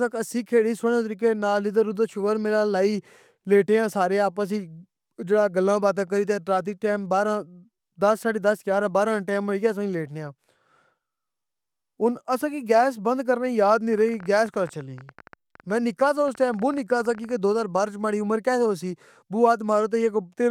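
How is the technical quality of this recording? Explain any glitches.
The recording has one clear glitch. From 13.93 to 17.32 s a train of clicks runs at about 13 per second, irregularly spaced, around fifty in all and roughly as loud as the speech. It is likely interference or a faulty connection or power supply. It sounds like uneven ticking, and it shows as thin vertical broadband lines on a spectrogram and sharp spikes in the waveform.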